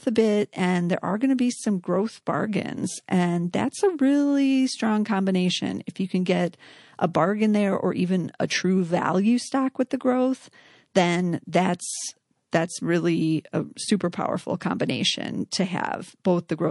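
A speech recording that was likely squeezed through low-bitrate MP3 encoding, with the plainly audible damage pointing to a rate around 48 kbps, leaves the whole clip with a watery, swirling texture as weak frequency lines drop in and out between frames, chirping on the sibilants. Around 8.48 to 8.50 s, between "there or even a" and "value stock with the", the encoder kept a long block of roughly 48 ms instead of switching to short blocks, so pre-echo smears quantisation noise about 14 dB up across the 24 ms before the attack, heard as a brief hiss that softens the onset.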